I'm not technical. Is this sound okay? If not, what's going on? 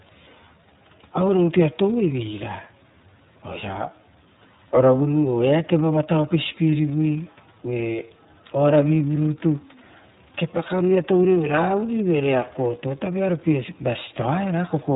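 No, the speech sounds muffled and slightly rough and robotic all the way through, because the iLBC codec discards everything above 4 kHz and rebuilds the speech in 30 ms chunks.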